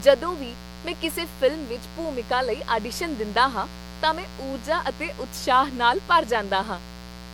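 A steady, raspy buzz runs under the speech from start to finish, sitting about 15 dB below it. This is mains buzz: sharp switching spikes leaking in twice per 60 Hz cycle, so the harmonics climb well into the kilohertz range instead of staying a low hum.

Throughout, the speech also sounds swirly, smeared and hollow, with consonant attacks blurred, and nothing reaches above 19.9 kHz. This is likely generation loss, the audio having been run through lossy coding a few times. That fits repeated MP3 passes at around 96 kbit/s, each one re-quantising on a shifted frame grid so the noise and spectral holes build up.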